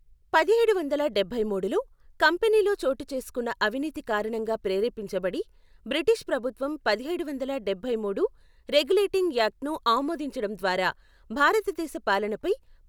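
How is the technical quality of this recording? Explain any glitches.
No technical faults can be heard in the recording.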